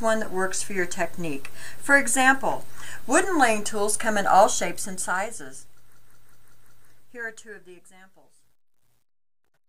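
From about 4.46 s the clip begins a fade-out, but the fade shows truncation distortion that runs to the end at 9.68 s. The gain stage behind the fade is discarding low-order bits without dither, and the grain points to only about 11 bits being kept. As the level falls, the waveform collapses onto a few coarse steps, adding a gritty, buzzy edge that tracks the signal. From about 7.42 s the steps are at their coarsest and the grit is at its worst.

Between 5.94 s and 6.87 s a system hang loop sits inside that fade. The same 185.76 ms segment plays five times in exact succession, a rigid stutter repeating at 5.38 Hz, which fits the audio hardware cycling an 8192-sample buffer while the software feeding it had stalled. Playback then resumes where it left off, so no material appears to be skipped.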